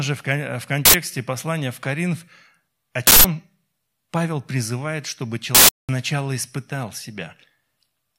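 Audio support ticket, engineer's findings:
Uninitialised buffer, three hits. Loud bursts of digital noise in place of the speech. 0.85–0.94 s, between "же в" and "послания в". 3.07–3.24 s. 5.55–5.89 s, right after "призывает чтобы". Lengths of 85, 171 and 341 ms fit whole blocks of 4096, 8192 and 16384 samples. Probable component: playback buffer handling. Mechanism: block sent out before audio was written, so stale memory was played as samples.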